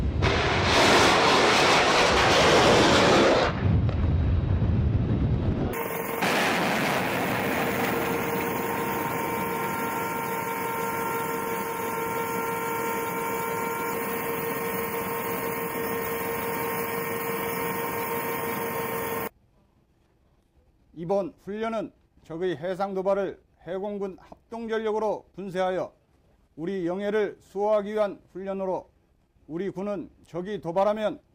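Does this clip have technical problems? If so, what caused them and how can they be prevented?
No, the signal holds steady throughout with no dropouts, distortion, level jumps or other technical faults to be heard, so there is nothing here that needs preventing.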